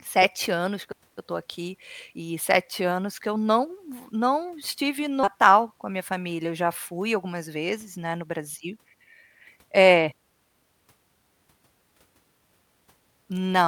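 A speech recording with two timing faults. At 5.23 s the talk jumps abruptly forward, losing about a fifth of a second with no gap: a skip ahead, where waiting audio was discarded to cut delay. From 7.24 to 8.39 s delivery sounds hurried at unchanged pitch, running about 7% fast: a jitter buffer speed-up, trimming roughly a tenth of a second in pitch-period slices.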